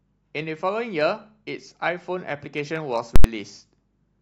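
At 3.16 s the speech hits invalid numbers at full scale until 3.24 s. A calculation produced invalid values that were pinned to the largest positive or negative value, so the output sticks at one extreme value far from zero for about 85 ms, which fits a 4096-sample block. This is heard as a very loud pop, a gap of nothing, then another pop. The waveform shows a flat slab beyond the speech peaks. The spectrogram shows bright broadband stripes at each edge with emptiness between.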